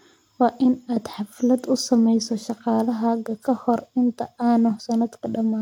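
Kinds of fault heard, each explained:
No technical faults can be heard anywhere in the speech signal.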